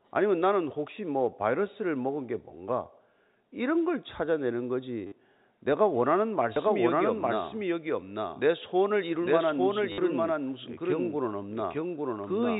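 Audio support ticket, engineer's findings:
Packet loss with last packet repeated, 5.07–5.12 s (50 ms). Short robotic stutter. Waveform: one short segment tiled identically, discontinuities at seams. Spectrogram: vertical click lines, comb of harmonics at 100 Hz.

Packet loss with last packet repeated, 9.92–9.98 s (60 ms). Same stutter and buzz. Repeat length fits 10 ms packets. Receiver concealment replays the last packet, out of step with pitch. Telephone band limit at 4 kHz is visible throughout.

Doubled audio track, 6.56 s to end. Full-band second copy roughly 1 s behind, at about the same level, starting abruptly. Likely cause: a second capture path or an edit holding two misaligned copies. Dry, with no decay or room colour.

Doubled audio track, visual check. Spectrogram: every speech pattern reappears about 1 s later, full bandwidth, identical shape and brightness, overlapping the live signal. 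Waveform: denser envelope from 6.56 s, with a hard onset and no fade-in.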